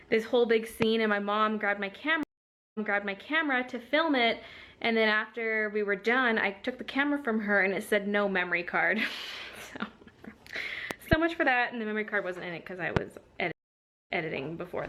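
A voltage pulse, likely from a plug, switch, static or driver glitch, enters the signal at 0.82 to 0.85 s as a loud pop roughly 20 dB above the sound, which carries on underneath. At 2.23 to 3.49 s the stream connection drops and a fresh decoder starts mid-stream: about 0.51 s of silence, then audio fading back in from a point 0.74 s earlier, so that stretch repeats. Two more pulses give a double pop between 10.91 and 11.15 s, and a single loud pop at 12.97 to 12.99 s, each around 20 dB above the sound. A second stream reconnect at 13.52 to 14.24 s leaves about 0.54 s of silence before the audio fades back in, resuming 0.19 s earlier and repeating that short moment.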